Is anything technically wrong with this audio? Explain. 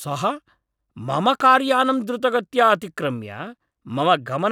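Yes. From 1.40 to 1.54 s, a loud pop: two sharp thumps, likely from a voltage pulse, peaking a few decibels above the speech, showing as vertical broadband spikes.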